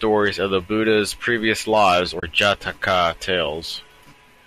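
AAC frame loss with muting occurs from 2.20 to 2.23 s, leaving a gap of about 30 ms in the speech, which fits three lost 10 ms frames of a low-delay AAC stream. The decoder filled the missing frames with a zeroed spectrum, and because the overlapping transform windows taper on either side, the sound fades out and back in rather than stopping abruptly. It is a brief, soft-edged hole, heard over the slight roughness of the likely low-delay coding.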